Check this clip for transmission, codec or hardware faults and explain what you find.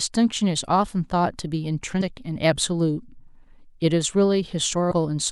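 The speech has compressed frames skipped at 2.00 s and 4.90 s. Whole frames of about 26.1 ms each never reach playback. The audio jumps ahead, roughly 150 ms then 100 ms, consistent with several dropped frames. Overlapping neighbours leave each join a brief smeared blip.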